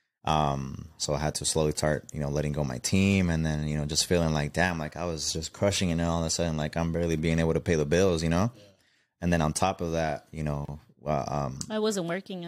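At 10.65 s, just after "top of that you", the speech drops out for about 30 ms: a gap at a join of encoded pieces. Separately encoded segments were spliced untrimmed, leaving encoder delay and end-frame padding as silence with smeared edges before the speech resumes.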